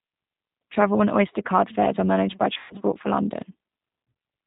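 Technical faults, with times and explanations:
Throughout, G.729 codec: low-rate pulse-based speech rebuilding sounds rough and slightly synthetic; spectrogram shows nothing above 4 kHz, plainly audible damage.
2.54 to 2.75 s, VoIP packet loss concealed by the speech codec: about 140 ms lost, longest gap 120 ms; decoder repeats last pitch, giving a fading buzzy tone or coloured noise, smeared harmonics on spectrogram.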